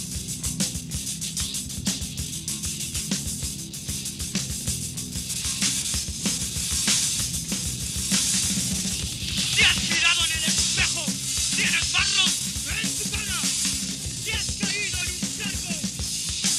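From 6.17 to 9.95 s, a doubled audio track: a copy trailing around 1.5 s, about 5 dB quieter, likely a slower second capture path.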